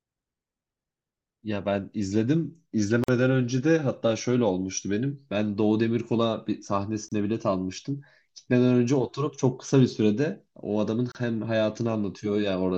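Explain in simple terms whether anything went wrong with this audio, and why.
A gap at a join of encoded pieces shows up at 3.04, 7.08 and 11.12 seconds, every 4 seconds, as brief dropouts of about 46, 32 and 32 milliseconds. The speech was encoded in separate chunks, and each chunk's leftover start and end silence was never trimmed.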